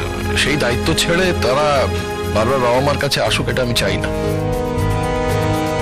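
Hard clipping runs throughout the audio: driven about 10 dB past the stage's ceiling, roughly a tenth of samples are flattened, adding high harmonics heard as harsh fuzz on loud passages.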